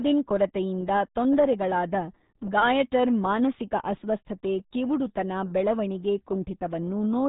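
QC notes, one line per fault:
Throughout: RealAudio 14.4 codec. Nothing survives above 3.8 kHz, so the speech sounds muffled and boxed in. Heavy coding damage makes it gargly and smeared. This fits the very low 8 kbit/s dial-up speech codec squeezing the signal.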